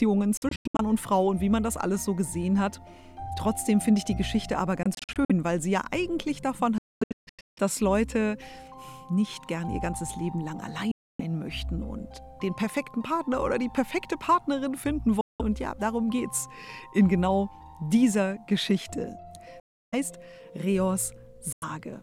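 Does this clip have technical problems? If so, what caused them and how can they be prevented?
Yes. A likely Bluetooth dropout: packets reached the headphones too late and were discarded, so the sound cuts out abruptly at 0.37–0.81, 4.83–5.31, 6.78–7.58, 10.91–11.21, 15.21–15.42, 19.60–19.94 and 21.53–21.64 s. The early gaps are broken into scattered holes, the longest about 0.23 s within the gap at 6.78–7.58 s. Afterwards the sound resumes further on, as if it had kept playing. Keeping the headphones near the source with a clear path and less 2.4 GHz interference prevents this.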